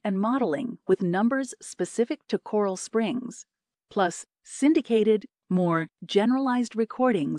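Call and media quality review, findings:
No faults found in review.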